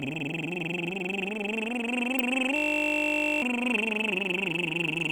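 A system hang loop hits this music clip from 2.56 to 3.42 s: one 20 ms slice repeats 43 times, giving a steady 50 Hz buzz as the frozen system leaves the hardware cycling one short ring buffer, and roughly a second of music is lost.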